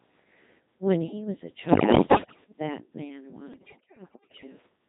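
From the start the whole clip carries the Codec 2 vocoder's signature. Speech comes out robotic and buzzy, which fits a setting around 2.4 kbit/s with heavy damage. Only pitch, voicing, energy and a coarse envelope survive, and sine-wave synthesis rebuilds the sound. On a spectrogram the harmonics are neat, evenly spaced lines under a smoothed envelope, and fine noisy detail is missing. The waveform no longer resembles natural speech.

From 1.68 to 2.44 s and again from 3.54 to 4.47 s, bit errors on digital voice radio break the signal up. With roughly one bit in ten flipped, each corrupted frame decodes with the wrong pitch, level or voicing. The synthetic sound lurches into bleeps, warbles and gibberish. A spectrogram shows harmonic lines jumping frame to frame, with abrupt bright or empty blocks. The waveform's envelope steps erratically.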